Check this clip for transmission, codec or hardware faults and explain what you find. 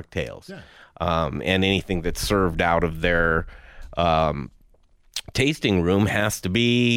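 No faults are audible anywhere in the speech.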